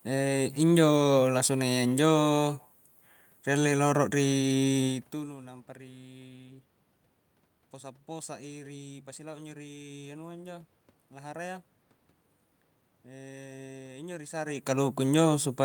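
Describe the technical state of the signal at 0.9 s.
At 0.9 s the signal is intact, with only the background noise of the room audible beneath the speech.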